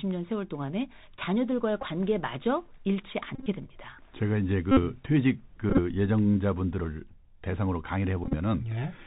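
From start to finish the speech carries the damage of the Bluetooth CVSD headset codec. This narrowband codec sends a single up-or-down bit per sample at 64 kHz with an adapting step size, so nothing above 4 kHz survives. Here the damage is plainly audible: s sounds come out scratchy, loud high-frequency moments distort where they outrun the step size, and a granular hiss sits under the speech.

On top of that come five bursts of Bluetooth headset packet repeats. Packets between headset and phone were lost, and the decoder replayed the previous packet's bits in their place. Whenever several repeats follow one another, that 3.75 ms recycling produces a steady buzz near 267 Hz. At 1.82–1.86 s, about 19 ms is lost within a 30 ms span, with the longest run around 10 ms. At 3.35–3.48 s, 82.5 ms goes missing across 120 ms, with runs up to roughly 30 ms, giving a buzz. At 4.71–4.80 s, 56 ms is lost. 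At 5.70–5.80 s, 52.5 ms is lost across 82.5 ms, and at 8.24–8.35 s, 60 ms across 90 ms. In both of these, runs of around 20 ms break into brief buzzing stretches.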